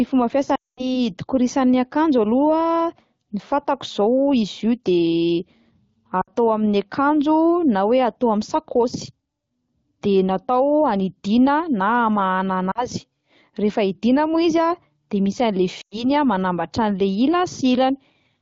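Radio errors corrupted runs of speech frames, so the AMR wideband decoder extended the last good pitch and vocal-tract settings at falling gain. This lost AMR speech frames fault smears and fades the speech at 0.55–0.98 s, longest and fading to silence, then briefly at 6.21–6.30 s, 12.71–12.88 s and 15.81–16.10 s.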